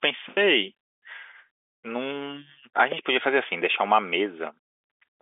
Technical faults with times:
none

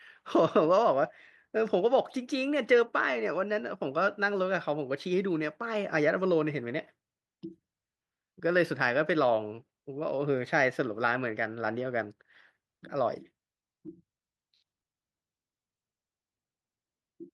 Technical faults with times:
13.87 short concealed packet loss

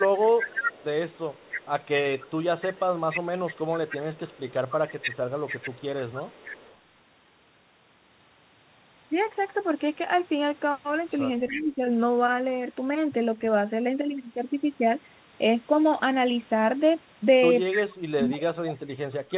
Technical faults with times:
0.23-1.66 echo leak
2.19-2.31 echo leak
2.62-6.77 echo leak
11.40-11.90 speech suppressed in double talk
11.48-11.62 echo leak
17.70-19.37 speech suppressed in double talk
17.72-17.77 echo leak

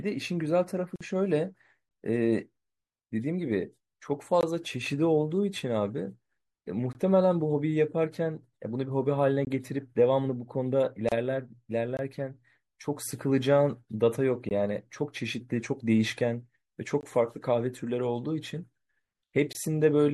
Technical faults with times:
0.00-20.14 MP3 compression
0.96-1.01 gap at a join of encoded pieces
4.41-4.43 gap between chunks
6.93 gap between chunks
9.45 gap between chunks
11.09-11.12 gap at a join of encoded pieces
11.97 gap between chunks
14.49 gap between chunks
17.01 gap between chunks
19.53 gap between chunks

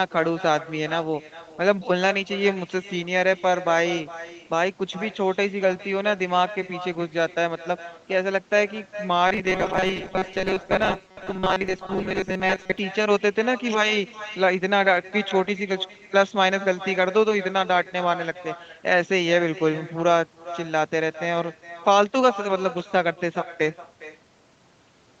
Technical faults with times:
0.00-25.20 echo with no canceller
9.27-12.79 robotic sound from repeated short buffers

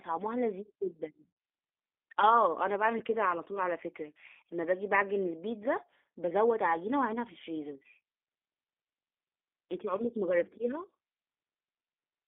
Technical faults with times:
0.00-12.28 G.729 codec
1.32-1.40 VoIP packet loss concealed by the speech codec
2.99-3.02 VoIP packet loss concealed by the speech codec
6.66-6.72 VoIP packet loss concealed by the speech codec

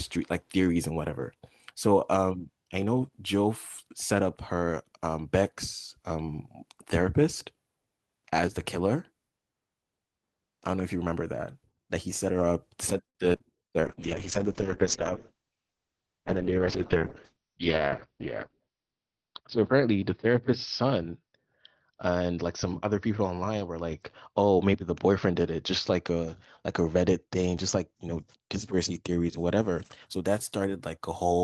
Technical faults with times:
13.09-13.17 short stall from a late packet
13.33-13.41 short concealed packet loss
13.85-30.12 call bitrate drop
15.33-15.71 jitter buffer speed-up

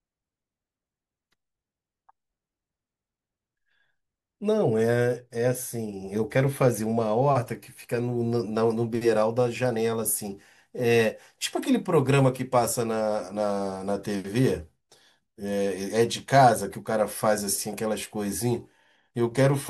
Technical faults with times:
none

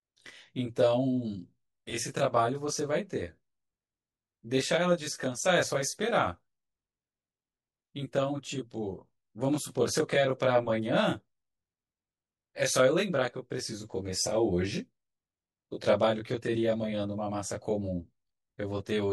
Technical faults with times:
0.00-19.12 channel delay (comb filtering)

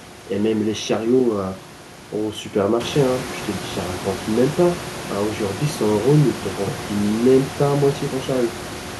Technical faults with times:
none

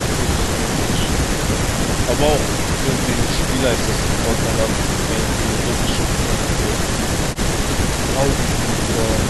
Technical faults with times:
none

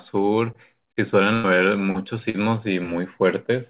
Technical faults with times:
1.34-1.46 burst of packet loss
2.30-2.36 short concealed packet loss

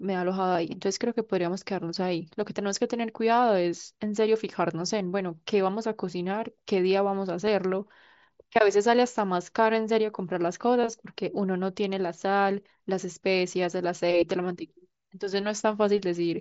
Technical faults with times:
0.53-0.55 concealed Bluetooth headset packet loss
2.40 concealed Bluetooth headset packet loss
7.47 concealed Bluetooth headset packet loss
10.81-10.84 concealed Bluetooth headset packet loss

